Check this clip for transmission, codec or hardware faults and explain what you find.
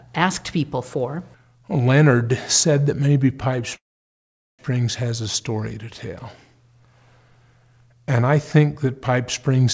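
One transmission fault is audible in the speech, heard through a call path whose G.722 coding leaves nothing above 8 kHz. A call audio freeze runs from 3.76 to 4.61 s. The audio stalls into near-silence for about 0.79 s, likely because delayed packets drained the jitter buffer. It then resumes intact on "has a story", adding 0.83 s of delay without losing any content.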